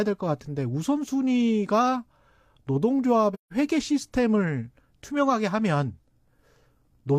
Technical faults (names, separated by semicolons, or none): AAC frame loss with muting